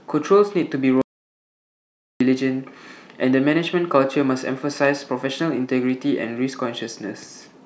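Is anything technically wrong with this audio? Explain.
Yes, there's an audio dropout to silence from about 1.02 s to 2.21 s, so roughly 1.2 seconds of speech simply vanish. The speech cuts off mid-flow and comes back just as abruptly, and the gap in between is dead digital silence with no room tone at all. That points to the input being lost for a moment, likely a disconnected device, a failed link or an accidental mute, while the recorder kept writing silence.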